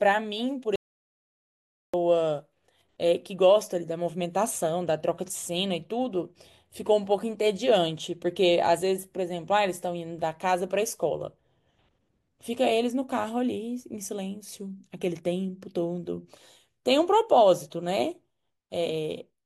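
At 0.76 s the speech drops out to dead silence and doesn't come back until 1.94 s, so about 1.2 s of talk is just gone. It's an audio dropout to silence: no room tone, no hiss, nothing, which tells you the recorder kept writing silence while the input was missing. The likely cause is a lost input, like a device briefly disconnecting, a link failing or a stray mute, and the speech resumes abruptly mid-flow.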